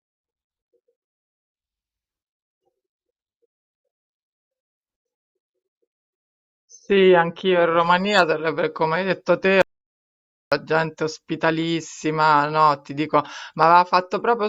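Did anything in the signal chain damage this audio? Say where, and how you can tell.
Yes. Pre-emphasis was left on from 7.79 s to the end: the CD 50/15 µs treble boost was never undone at playback or conversion. Highs at 10 kHz sit about 8 dB above 1 kHz, so the speech turns suddenly thin, bright and sibilant.

An audio dropout to silence runs from 9.62 s to 10.52 s, about 0.9 s of silence with no room tone. The input side likely lost its signal while the recorder kept writing samples, so the speech cuts off abruptly and that stretch is gone.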